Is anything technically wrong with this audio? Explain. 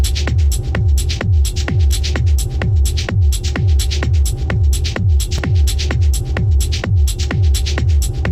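Yes. At 5.38 s there is a block of digital silence: the signal drops to nothing for about 4 ms, then resumes with no fade. This could come from an output buffer left unfilled in time or from a calculation producing invalid values. At this length it is heard as a tick or dip, not as silence.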